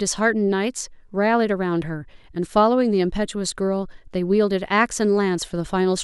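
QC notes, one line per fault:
Nothing to flag on this speech clip, no faults turned up anywhere in it.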